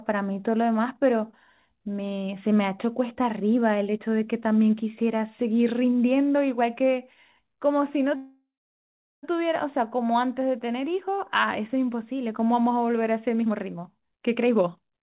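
At 8.16 s the speech stops moving forward. The last sound is stretched into a fading buzz that sinks to silence for about the last 0.73 s, and the speech resumes at 9.25 s exactly where it left off. This is a call audio freeze, likely caused by packets held up in transit until the jitter buffer ran dry. The receiver padded about 1.07 s and dropped nothing, so everything after it arrives about 1.07 s later.

From 13.41 s to the end at 15.04 s the speech sounds hurried, running at roughly 142 % of normal rate while its pitch stays put. This is a jitter buffer speed-up: having built up more audio than it wanted, the receiver cut out short pitch-period-length slices again and again, removing roughly 0.7 s in total to claw back the delay. Throughout, the narrowband call codec leaves nothing above 4 kHz.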